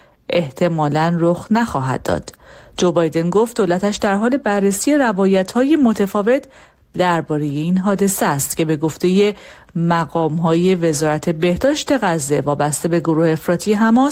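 Speech, with no technical faults to report.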